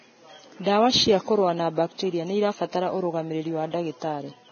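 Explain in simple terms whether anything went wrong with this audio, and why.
Yes, something went wrong, and it lasts the whole clip. The speech sounds dull and grainy. Nothing is heard above about 6.5 kHz, so the crisp top end is gone. The remaining treble turns into a rough hiss, and sharp sounds lose their edges. The likely cause is heavy Vorbis compression. To save space, the codec cuts off the highest sounds and stores the upper detail so crudely that it comes out as noise.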